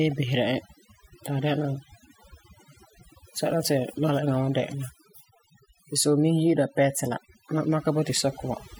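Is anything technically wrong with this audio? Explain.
Yes. Throughout the speech there is overdone noise removal: a reduction stage set too aggressively cuts individual frequency bands whenever they sit near its noise estimate, taking quieter speech detail with them. The background drops and breaks up into twinkling specks.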